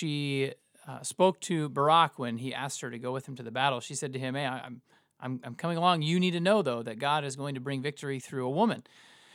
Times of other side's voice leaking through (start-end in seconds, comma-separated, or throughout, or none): none